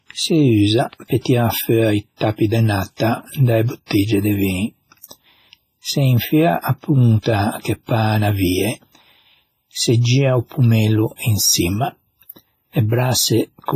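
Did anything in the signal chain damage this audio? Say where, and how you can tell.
Yes, at the codec. Throughout, the speech rings and washes, with hiss that breathes. That fits heavy WMA compression, likely around 24 kbps, smearing noise across long blocks.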